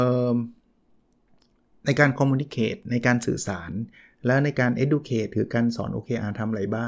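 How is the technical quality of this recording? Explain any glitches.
Nothing here trips any alarm: the speech runs along steadily with no dropouts, clicks, distortion or odd jumps anywhere in the recording.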